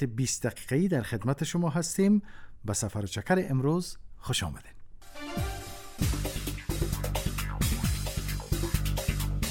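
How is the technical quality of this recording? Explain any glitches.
One glitch stands out, a brief dropout from lost LE Audio frames. The light lossy compression heard throughout is working as intended.

From 6.34 to 6.36 s, about 20 ms of audio goes missing in transmission. That fits two 10 ms frames lost over the Bluetooth LE Audio link. The LC3 decoder fills the gap with concealment. It reuses the last good spectrum but gives each component a random sign. Any tonal content becomes a short, noisy smear instead of a clean click or silence.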